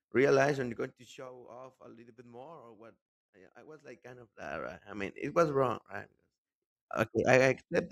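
From 0.56 to 1.30 s the speech drops by roughly 20 dB, and you get zipper noise: the gain moves in unsmoothed 2 dB jumps, around fifteen a second, so each jump leaves a little click and the fade turns into a ticking zip. The same thing happens on the way back up, 3.72 to 4.92 s, a rise of about 20 dB in 2 dB steps at a slower ten-ish per second.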